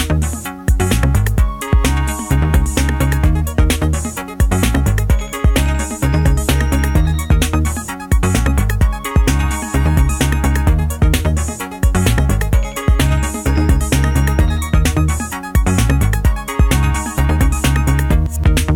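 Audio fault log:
Nothing stood out on listening to this clip.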